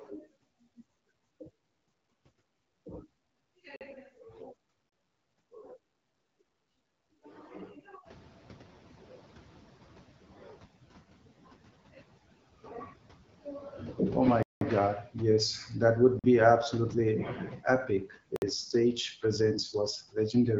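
A block of digital silence cuts the speech at 3.76 s for about 46 ms, and again at 4.89 s for about 30 ms. The output buffer was likely not filled in time, so the audio drops abruptly to zero and back, leaving a short hole. The 46 ms length fits a 2048-sample buffer.

Noise suppressor catching up runs from 8.05 s to 10.64 s. Around 8 s the room noise jumps by about 19 dB, and the suppressor's noise estimate lags behind. The noise comes through with less reduction at first, then sinks by about 7 dB over roughly 2.6 s as the estimate adapts.

AMR bit errors hit from 14.21 s to 14.32 s. Over a weak link, a few percent of the less protected bits in the AMR-WB frames arrived flipped while the core checksum still passed. The excitation pulses and fine parameters land wrong, so the speech keeps its pitch and level but briefly turns hoarse and gargly.

Blocks of digital silence follow at 14.43 s (about 186 ms, consistent with an 8192-sample buffer), 16.19 s (about 46 ms) and 18.36 s (about 58 ms). 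Each cuts the sound out and back with no fade, and the longest leaves a short hole.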